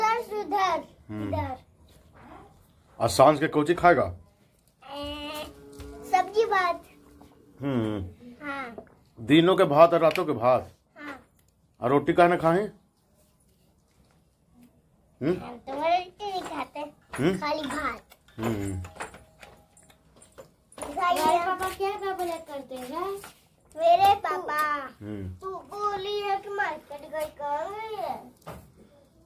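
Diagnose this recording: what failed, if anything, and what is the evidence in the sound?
Nothing failed; no fault is audible anywhere.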